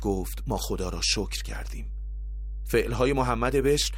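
A ground loop or nearby transformer couples the 50 Hz power line into the signal throughout, leaving a steady low hum nearly as loud as the speech itself.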